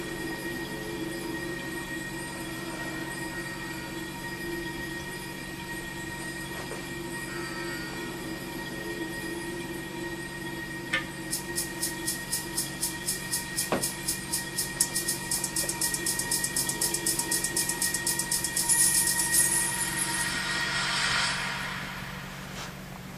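At 13.03 s the audio briefly freezes on a flat level for about 2.7 ms, then resumes softly with nothing missing: an underrun with held sample, consistent with the output buffer running empty for 128 samples.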